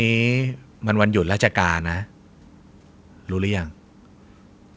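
No technical faults can be heard in the speech, which carries the ordinary coding texture of a call path and stops at about 8 kHz, consistent with a wideband call codec such as G.722.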